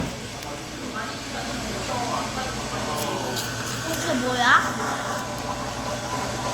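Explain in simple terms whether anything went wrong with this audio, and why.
Something went wrong in how these sounds were stored. They were likely squeezed and unpacked about five times over with a lossy codec, which is called generation loss. The damage piles up, so throughout the clip the sound is swirly, smeared and hollow, with blurred starts.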